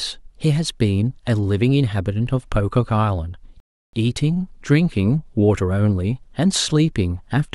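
At 3.60 s the player's buffer ran dry, a rebuffering stall: the speech drops to silence for about 0.33 s, then resumes exactly where it stopped, nothing lost.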